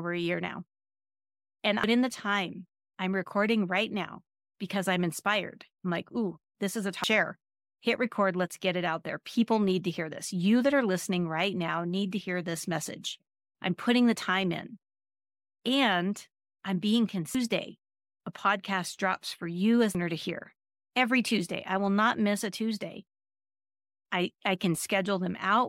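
Damaged data in a compressed stream corrupts frames at 1.84, 7.04, 17.35 and 19.95 s. Each time the decoder misreads the bad bytes and loses sync while hunting for the next valid frame header, so the speech is broken by a brief chirp or blip.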